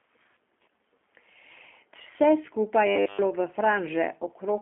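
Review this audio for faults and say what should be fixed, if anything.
The call path carried the whole clip through the G.729 codec at 8 kbit/s, rebuilding speech from a vocal-tract filter, pitch predictor and sparse pulses. The result is confined to roughly 250 to 3400 Hz with nothing above 3.6 kHz, so it sounds muffled, rough and slightly synthetic. Preventing this means using a wideband codec such as Opus or G.722 whenever the link allows it.

From 2.87 to 3.23 s, the audio turns into robotic sound from repeated short buffers. The likely cause is new audio arriving too late, so playback looped a short chunk in place of most of the real audio. The loop imposes a rigid 100 Hz metallic buzz, which fits a 10 ms buffer. Preventing this means giving the jitter buffer enough depth and using proper packet-loss concealment rather than raw buffer repetition.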